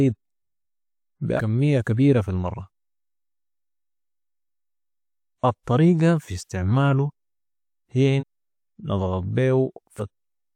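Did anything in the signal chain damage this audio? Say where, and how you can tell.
Yes, at the codec decode stage: compressed frames were skipped three times. At 1.36 s, just before "كمية كبيرة في المرة", the speech jumps forward by roughly 300 ms. At 8.19 s it loses about half a second, and at 9.98 s about 300 ms. Each jump is a whole multiple of a 42.7 ms frame. Nothing fills the gap with silence or a repeated sound, so this is not network dropout concealment.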